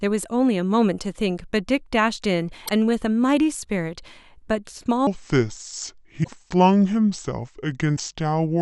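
At 2.65 to 2.69 s the speech jumps ahead and the sound briefly breaks up. This is most likely a broken MP3 bit reservoir. Frames were cut out, and the next frame reached back for borrowed data that was no longer there. It decoded bytes from another frame instead. The glitch lasts about 40 ms, under two frames of about 24 ms.

From 5.07 s to the end, the speech plays at the wrong speed. It runs at 0.712 times normal rate, so it sounds slow and heavy. Pitch drops by roughly five semitones along with it. Speed and pitch shift together at one instant. The likely cause is this part being played against the wrong clock.

Inside that slowed section, the same bit reservoir fault returns twice. At 6.23 to 6.28 s the sound skips and breaks up. That is likely again a missing frame's borrowed data. At 7.96 to 8.00 s another short jump occurs, likely from the same broken reservoir.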